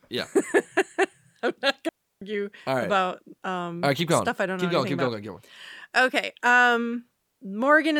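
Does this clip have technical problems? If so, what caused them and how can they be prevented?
Yes: a digital wireless dropout mutes the speech from 1.89 to 2.22 s, a clean 330 ms hole where the receiver lost data. Keep clear line of sight and minimise transmitter-to-receiver distance.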